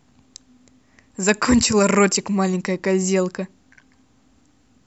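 Speech recording with no technical faults audible anywhere in the clip.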